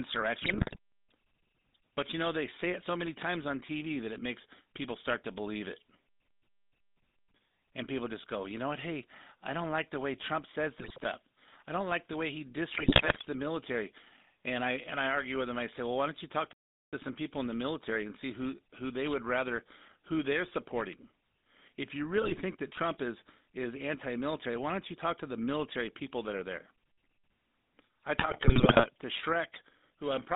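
Throughout, the speech carries the sound of the GSM full-rate codec: a band of roughly 200 Hz to 3.7 kHz at about 13 kbps, with a plainly audible buzzy, gravelly roughness. Unlike bit errors, this coarse pulse-driven vocal-tract model is steady rather than bursting.

GSM bit errors strike at 0.38 to 0.77 s, 10.78 to 11.04 s, 12.74 to 13.27 s, 22.22 to 22.42 s and 28.18 to 28.87 s, with about 3% of bits flipped. Corrupted filter, pitch and gain values make the speech squawk, pop and gargle for each burst's length, while the sound never actually stops.

At 16.53 s the output goes silent for about 0.39 s, a playback stall, likely because the player ran out of data or its thread was blocked. A clean gap with no garbling sets it apart from the error bursts.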